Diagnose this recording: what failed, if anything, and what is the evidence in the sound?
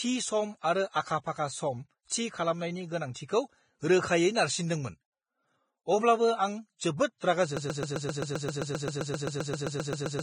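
Codec stage. The speech sounds hissy and grainy throughout. Consonant attacks are blurred. Nothing is present above 9.7 kHz. This is heavy Vorbis compression, likely at a very low bitrate near 20 kbps. Coarse quantisation of the treble has turned fine detail into noise.

Playback or streaming stage. From 7.57 s to the end, one 131 ms fragment repeats exactly, back to back, 20 times. This is a broken-record loop. A stalled player or stream likely kept resending the last piece it held. The speech that belonged there is lost.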